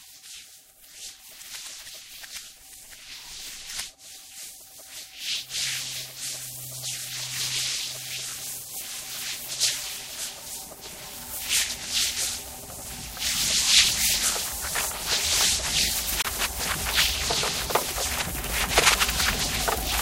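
At 16.22 s the audio shows a CD skip: the laser lost its track, likely from a knock or a disc flaw, and landed on a different turn of the spiral. The player muted briefly, for roughly 30 ms, ending at 16.25 s, then resumed from another point on the disc. It is heard as a short tick-like gap followed by an abrupt discontinuity, where the sound jumps to material that does not follow on from what came before.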